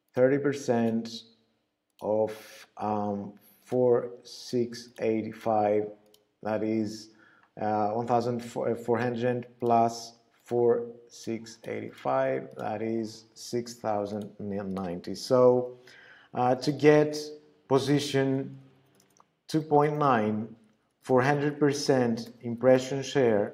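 Nothing in the audio stands out as a technical fault. It runs along without any dropouts, glitches or odd artefacts to point to.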